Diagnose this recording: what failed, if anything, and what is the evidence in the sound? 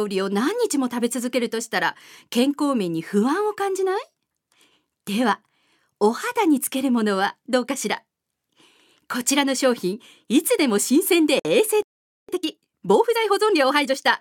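Gap at a join of encoded pieces, codec stage: a 55 ms silence at 11.39–11.45 s with smeared edges. Encoder delay and last-frame padding were left in at the splice.

Playback stall: the sound stops from 11.82 to 12.29 s, about 460 ms, then resumes. The likely cause is the player starving for data or a blocked playback thread.

Time-compressed catch-up, playback stage: from 12.29 to 14.07 s the audio runs at 1.25x speed with unchanged pitch. The player cross-fades out small pieces to clear its backlog.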